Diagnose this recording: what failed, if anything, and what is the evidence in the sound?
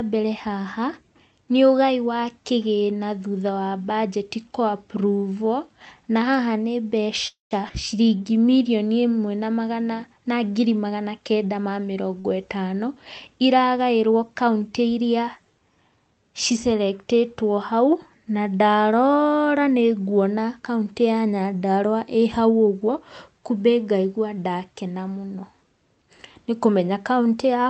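Call audio freeze, network and jitter buffer stage: after "na haha nĩ", 7.27–7.53 s carries a fading buzz, then about 150 ms of silence. Late packets likely starved the buffer. A spectrogram shows a smeared decaying band, then a blank gap.

Skip ahead, jitter buffer stage: at 7.69–7.71 s roughly 70 ms of speech vanishes as playback jumps forward. The waveform shows a near-direct splice with an abrupt envelope change.

Jitter buffer slow-down: 8.04–8.41 s plays at 88% speed, with 51 ms added by repeating pitch periods. Spectrogram harmonics look stretched horizontally with unchanged spacing, and the sound drags.

Short concealed packet loss, network stage: after "magana kenda ma", 40 ms at 12.20–12.26 s is filled by extrapolation, heard as a brief smear. A spectrogram shows blurred frames lacking transient detail.

Jitter buffer speed-up: 22.38–23.00 s, just before "kumbĩ ngaigwa ndakena mũno", runs at 112% with about 70 ms cut. 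Speech sounds hurried, and the waveform shows compressed syllable spacing at the same pitch.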